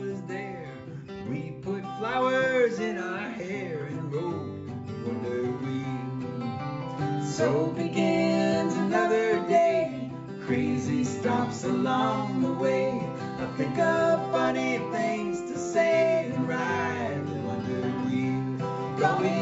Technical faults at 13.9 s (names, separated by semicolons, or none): none